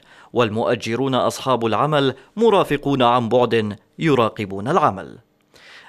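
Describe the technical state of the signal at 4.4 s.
At 4.4 s the speech signal is intact, with no audible technical fault at that moment.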